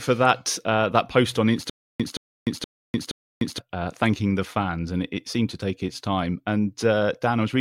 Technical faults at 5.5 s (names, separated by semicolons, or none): none